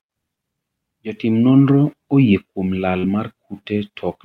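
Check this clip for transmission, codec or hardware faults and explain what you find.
One fault is present. Short concealed packet loss at 2.99 to 3.06 s: about 40 ms of speech arrived too late, so the receiver extended the preceding sound before blending back, leaving a brief smear.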